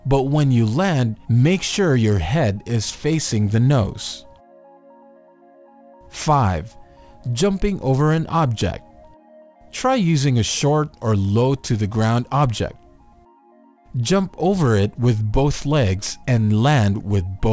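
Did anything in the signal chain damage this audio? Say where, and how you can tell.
Yes. Throughout the clip, high-frequency detail turns gritty and metallic, with spurious tones that don't belong to the sound, and the spectrum runs right up to a hard edge at 8 kHz. That is aliasing, introduced at a sample-rate conversion stage. Content above 8 kHz was folded back down to wrong frequencies instead of being filtered out first, and it sits roughly 25 dB below the signal. An 8 kHz fold point fits a drop from 44.1 kHz to 16 kHz with no anti-aliasing filter.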